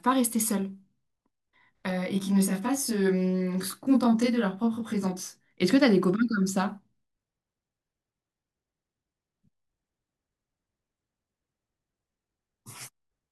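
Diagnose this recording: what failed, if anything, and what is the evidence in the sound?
The fault is a channel delay (comb filtering) at the driver or buffer stage, between 1.91 s and 5.51 s. During that stretch the speech sounds rough and slightly doubled. That fits one channel running about 20 ms late and then being summed to mono, so matching content cancels at evenly spaced frequencies, with the first notch near 20 Hz. On a spectrogram this shows as closely spaced horizontal dark bands that hold steady in frequency across the affected section, with clean spectral energy on either side.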